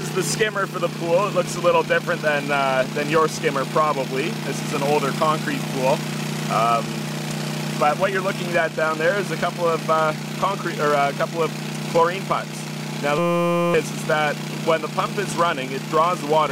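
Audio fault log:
13.18–13.74 s, system hang loop: the system stalled while the audio hardware kept replaying the same small ring buffer, about 5.8 ms long, which fits a 256-sample buffer. That one slice repeats exactly, roughly a hundred times, so in place of the real audio there is a steady buzz at about 172 Hz, the loop rate. When playback resumes, about half a second of the original sound is missing.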